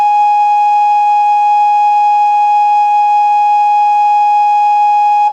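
No technical faults are audible anywhere in this music clip.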